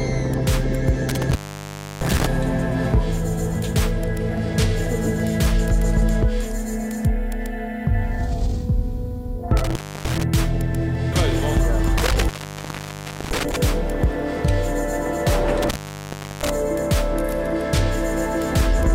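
The sound drops out four times from an intermittent contact: 1.09–2.26 s (open about 0.66 s), 9.57–10.23 s (0.30 s), 11.98–13.56 s (1.03 s) and 15.62–16.50 s (0.70 s). A loose cable or plug briefly breaks the signal path, leaving faint hiss with crackle at each edge.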